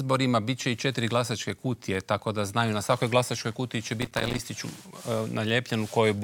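From 4.02 to 4.39 s a gritty crackle tears through the sound: processor overload crackle, with dozens of missed buffers, each only a few milliseconds, dropping to silence.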